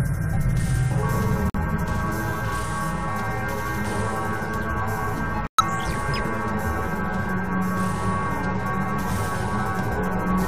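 At 1.50 s the audio drops to dead silence for about 66 ms, and at 5.47 s for about 137 ms. This is a corrupt frame muted fault: damaged compressed frames were rejected and replaced with silence, showing as abrupt flat-line gaps in the waveform and full-height blank columns on the spectrogram, with timing intact.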